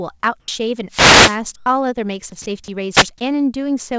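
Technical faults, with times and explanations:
0.40–0.48 s and 2.42–2.46 s, sound dropped by the voice detector: the speech briefly gives way to a steady hiss for 80 ms and then 40 ms, losing about 30 ms and 40 ms of sound. This is likely a voice detector mistaking part of the sound for background and stopping transmission, so the receiver filled the gap with comfort noise.
0.88–1.40 s and 2.91–3.07 s, wireless microphone noise hit: a swish of static rises over the speech, lasting about half a second the first time and about 0.16 s the second. The analogue FM radio link faded as reflections cancelled, letting receiver noise swell and mask the signal.
1.56–1.66 s, comfort noise in place of the background: for 100 ms the background, which sits about 42 dB below the loud parts, turns into a flat, featureless hiss about 3 dB quieter. This likely comes from discontinuous transmission, with the sender pausing and the receiver substituting synthetic noise for the real room sound. 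Throughout, the call codec passes nothing above 8 kHz, which fits G.722 at 64 kbps.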